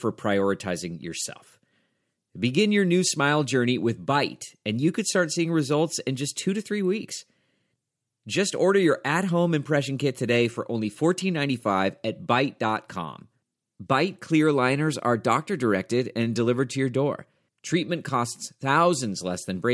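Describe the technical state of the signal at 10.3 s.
At 10.3 s the audio is intact, with no dropout, distortion, glitch or other fault in the signal at that point.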